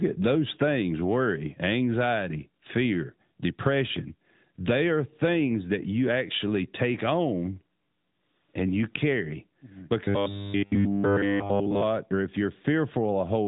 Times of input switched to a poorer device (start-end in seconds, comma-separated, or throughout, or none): none